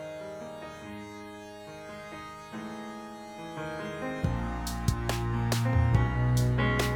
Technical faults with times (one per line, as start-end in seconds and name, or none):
none